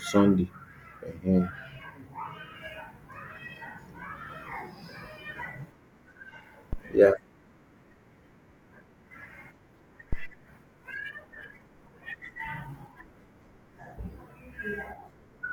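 A supply switched on a live input sends a step through the coupling capacitors, causing a phantom power thump at 6.73–6.81 s and 10.13–10.36 s: deep thuds peaking near about −19 and −17 dBFS, decaying within 19 and 53 ms.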